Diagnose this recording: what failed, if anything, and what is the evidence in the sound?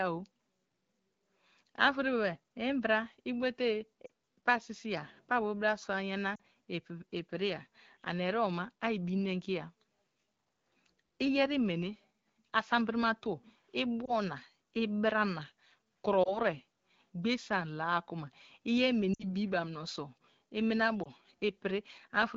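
Lost AMR speech frames, a network-stage fault: brief warbles and dips at 4.05–4.10, 6.35–6.39, 14.05–14.13, 16.24–16.40, 19.14–19.24 and 21.03–21.07 s. The AMR-WB decoder stretched the last good pitch and vocal tract settings with falling gain, so the sound smears and fades rather than cutting to a hard, clicky gap.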